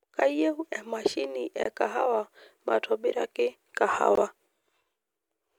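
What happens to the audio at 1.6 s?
At 1.63 s the speech drops out for a brief, hard-edged hole lasting 20 ms, running to 1.65 s, then resumes exactly where it stopped. This is a gap between chunks: the audio is handled in blocks of about 2.5 s, and silence has been inserted at the join rather than the next block following on seamlessly. Nothing is missing from the speech itself. The flow is simply interrupted by that short, abrupt silence at the boundary.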